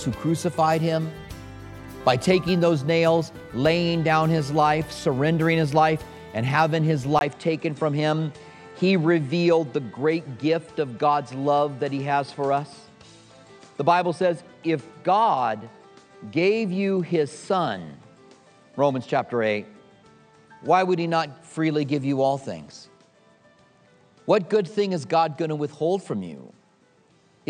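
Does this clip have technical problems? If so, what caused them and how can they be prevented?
Yes. At 7.19 s there's a 20 ms dropout, and from then on the sound loses everything above 9.2 kHz and picks up a faint new hiss, at about the same level. That's likely the input switched to a poorer device. Lock the recording input before you start.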